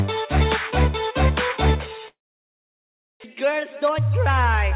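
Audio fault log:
2.08–3.26 s, long network dropout: audio stopped arriving for about 1.2 s, most likely a network outage. The receiver extended the last sound as a fading buzz, and within about a tenth of a second only silence remained. When sound resumes, roughly 0.6 s of material is simply gone, so the audio jumps ahead rather than picking up where it broke off. The delay shift that followed was large, around half a second.
3.34–4.72 s, jitter buffer speed-up: after the gap, the buffer held more audio than its target, so the receiver trimmed short pitch-period slices again and again to catch up. Across these 1.4 s the sound plays at about 112% speed with its pitch unchanged, shedding roughly a fifth of a second in total. It comes across as hurried, the timing pushed forward while the tone stays where it was.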